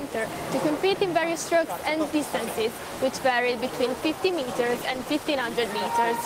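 From 4.38 s to 5.47 s the sound turns coarser and rougher, then clears again. This is a call bitrate drop: the bandwidth estimate fell and the encoder was starved of bits, consistent with a fall from 32 kbps to roughly 18 kbps.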